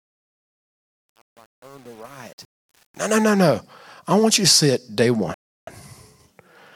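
A digital gain stage handled the fade-in on this speech clip without enough resolution or any dither, giving truncation distortion: from the start to 3.21 s the rising level is carved into coarse square steps, which fits a stage keeping only 8 bits. The quiet opening sounds gritty, worst up to about 2.94 s, clearing as the fade completes just before "no no I want". Later the player ran dry and waited for more data, a rebuffering stall: after "see it day one" the sound drops to silence from 5.34 to 5.67 s, then resumes exactly where it stopped, adding about 330 ms with nothing lost.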